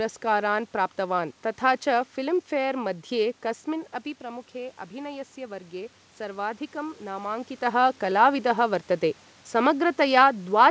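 From about 4.22 s to 7.55 s there's some automatic gain rising. The input dropped by about 11 dB, likely because the talker moved back around three and a half seconds in, so the AGC slowly pushed gain up about 5 dB, and the voice and room noise swell together.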